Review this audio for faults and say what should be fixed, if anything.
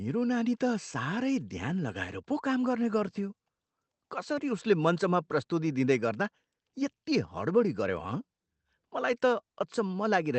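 No faults found; nothing needs fixing here.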